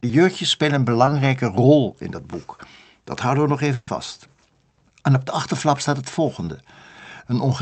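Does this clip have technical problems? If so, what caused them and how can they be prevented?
Yes. Short concealed packet loss occurs at 1.05–1.09 s and 6.45–6.49 s: about 20 ms arrived too late, and the receiver extended the preceding sound, leaving a brief smear. A modest jitter buffer increase and in-band forward error correction would prevent this.

A burst of packet loss at 3.75–3.89 s replaces 120 ms with a continued, decaying copy of the previous sound, and the audio resumes past the missing section. Redundant encoding and a more stable network route would prevent this.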